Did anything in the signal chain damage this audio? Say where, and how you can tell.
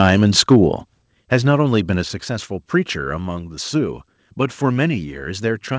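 Yes. From 0.00 to 0.57 s the loudest peaks are flattened and carry a harsh, crackling edge. This is microphone overload, likely at the converter. The input ran about 4 dB past full scale, so roughly one to two percent of samples were cut off.

At 1.02 s the microphone volume steps down. The whole level drops by about 5 dB at once, background included, just after the distorted opening. That points to call processing, likely automatic gain control cutting the device's input volume in one step, with nothing above 8 kHz from the G.722 call path.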